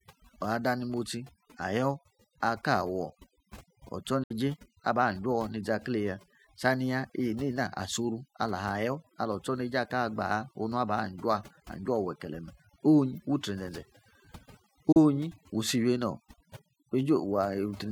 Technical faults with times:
0.00-17.92 overdone noise removal
4.23-4.31 digital broadcast dropout
14.92-14.97 digital broadcast dropout

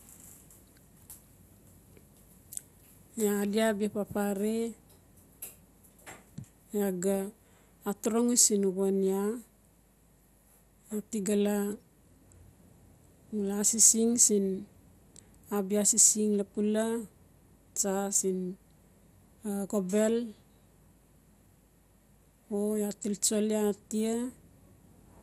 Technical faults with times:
0.00-25.22 MP2 compression

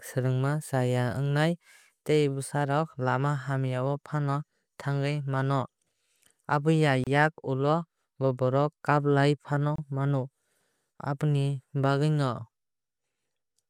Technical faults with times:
7.04-7.07 gap at a join of encoded pieces
9.76-9.78 gap at a join of encoded pieces

